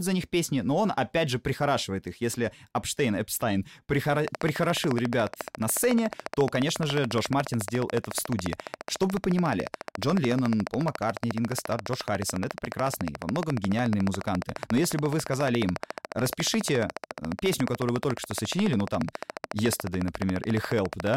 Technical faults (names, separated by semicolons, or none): train of clicks